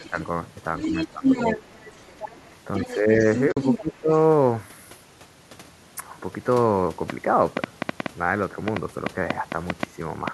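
Speech recording whose echo canceller is the likely culprit for two faults. First, speech suppressed in double talk: while both sides overlap, it ducks the talker along with the echo, so the voice dips by about 10 dB at 0 to 0.17 s and 0.86 to 1.6 s, about 5 dB at 2.86 to 3.24 s, and about 15 dB at 3.78 to 4.1 s. Second, the other side's voice leaks through because the canceller leaves loudspeaker pickup in the microphone. A faint scrap about 20 dB down sits at 0 to 0.26 s, a strong stretch only about 5 dB below the talker runs from 0.77 to 3.81 s, and a trace about 35 dB down appears at 4.12 to 4.17 s. At 3.52 to 3.57 s there is AAC frame loss with muting: the decoder zeroed the missing audio, leaving a 50 ms soft-edged hole that fades out and back in. From 7.1 to 10.29 s a train of clicks, likely interference or a faulty connection, puts roughly 15 sharp ticks at an uneven pace of about 4.4 per second over the audio, peaking about 20 dB above the signal.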